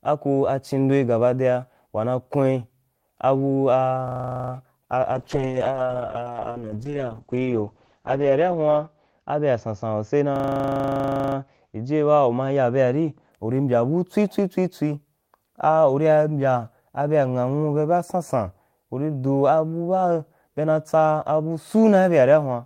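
At 4.08 s a system hang loop begins. The machine stalled while the audio hardware kept replaying its buffer. One 40 ms slice repeats 11 times at 25 Hz, until 4.52 s. It sounds like a harsh, rapid buzzing stutter.

From 5.14 s a call bitrate drop sets in. The encoder was starved of bits, which fits a fall from 32 to 8 kbps. The bandwidth narrows from 20 kHz to 8 kHz. The speech turns muffled and rough, bottoming out for about 3.2 s and recovering by 13.37 s.

Within that stretch, from 10.36 s to 11.36 s, the hang loop returns. The same 40 ms piece cycles 25 times, again buzzing at 25 Hz.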